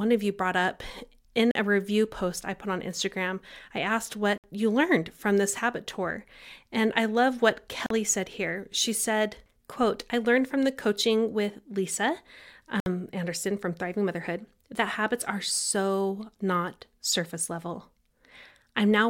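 The speech cuts to silence four times, at 1.51, 4.38, 7.86 and 12.80 s, for about 40 to 60 ms each. The first falls after "you brought up in", the second after "I asked", and the third after "I love what". These gaps are likely a Bluetooth dropout, with packets arriving too late to play. The speech cuts out and resumes as if it had kept running.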